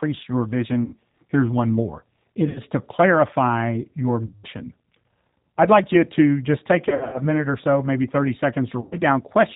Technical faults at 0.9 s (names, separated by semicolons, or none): G.729 codec; VoIP packet loss concealed by the speech codec